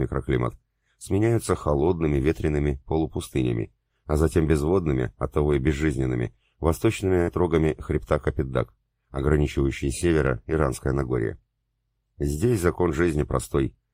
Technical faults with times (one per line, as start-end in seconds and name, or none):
7.21-7.29 burst of packet loss